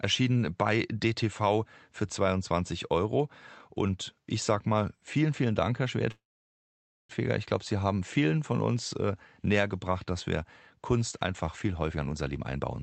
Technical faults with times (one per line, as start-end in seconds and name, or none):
6.11-7.11 call audio freeze
11.91-12.61 jitter buffer speed-up